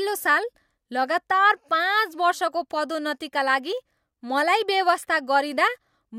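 No technical faults can be heard anywhere in this speech recording. Nothing in the audio calls for a timestamp or further comment.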